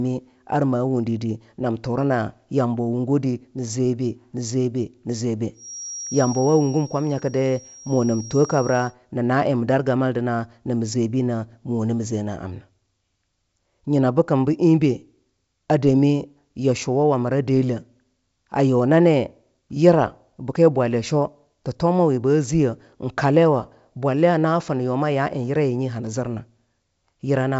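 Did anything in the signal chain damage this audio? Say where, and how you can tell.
Yes: a feedback whistle from 5.52 to 8.96 s, a steady 5.6 kHz tone about 20 dB below the speech, likely a loudspeaker-to-microphone loop near feedback, showing as a thin horizontal spectrogram line.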